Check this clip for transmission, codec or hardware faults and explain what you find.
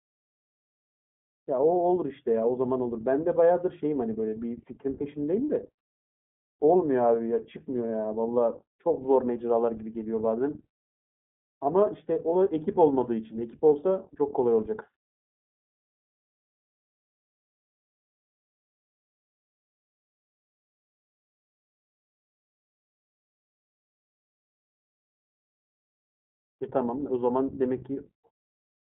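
The clip passes through the iLBC codec for its whole length, which fits this narrowband VoIP coder in its 15.2 kbps mode. iLBC encodes each 20 ms frame of the speech excitation on its own, without using the previous frame, and squeezes the signal into a telephone line band of roughly 150 Hz to 3.6 kHz. Everything above 3.6 kHz is removed, so the speech sounds boxed-in and dull. The coarse per-frame coding also leaves a plainly audible rough, slightly synthetic texture throughout.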